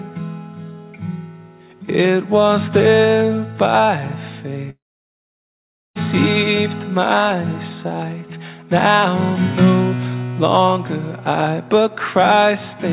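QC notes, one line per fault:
4.70 to 5.98 s, long network dropout: the audio trails off into a brief fading buzz, then falls silent for about 1.2 s and resumes with about 1.26 s missing. This is likely a run of lost packets that the receiver masked briefly before going silent.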